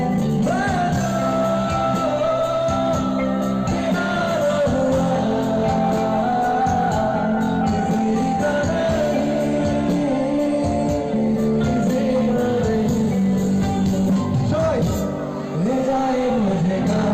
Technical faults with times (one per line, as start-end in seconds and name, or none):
none